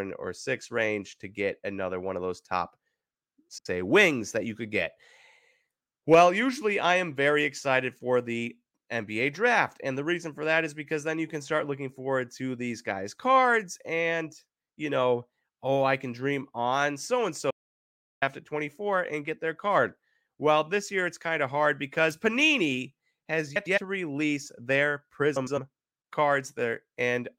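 Speech, with two kinds of fault. Frames out of order occur at 3.50 to 3.66 s, 23.56 to 23.78 s and 25.36 to 25.58 s. In each, two adjacent blocks of audio were decoded in swapped sequence, so the stretch plays back to front in halves. It gives a brief garbled flutter. The first swap exchanges two 78 ms blocks, consistent with three-frame runs. The later two exchange 105 ms blocks, consistent with four frames each. No duration is lost. An audio dropout to silence runs from 17.51 to 18.22 s, cutting the speech off mid-flow for about 0.71 s. The gap is silent with no room tone, and whatever was spoken there is missing. The likely cause is loss of the input signal, such as a disconnected device, a failed link or a momentary mute, while recording continued writing silence.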